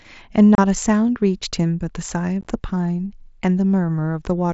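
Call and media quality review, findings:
Unconcealed Bluetooth headset packet loss: abrupt 30 ms hole at 0.55 s; rough, chopped gaps 2.41–2.47 s. Lost headset-link voice frames replaced by silence, over a mSBC link audible up to 8 kHz.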